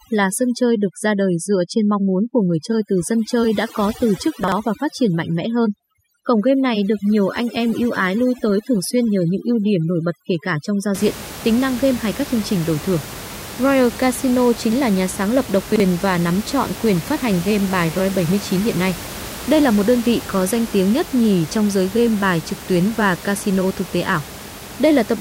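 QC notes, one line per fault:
0.00–10.94 s, overdone noise removal: Noise reduction set far too aggressively pulls individual frequency bands down or out wherever they sit near the room noise, about 14 dB under the speech, so the background drops and breaks up into twinkling specks while quieter speech detail goes with it.
4.44–4.52 s and 15.72–15.80 s, chunks out of order: At each spot a 40 ms block of audio was delivered or written one block late and plays after the block that should follow it, so nothing is missing but the sequence is swapped, giving a brief jumbled stutter with three hard joins.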